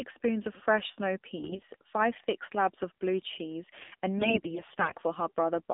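Speech carried through the AMR narrowband mobile codec throughout, band-limited to 200 Hz to 3.7 kHz and plainly buzzy and synthetic, which fits the low 7.4 kbps mode. AMR bit errors at 1.36–1.68 s and 4.18–4.95 s leave pitch and level intact but turn the voice hoarse and gargly, consistent with a few percent of flipped bits.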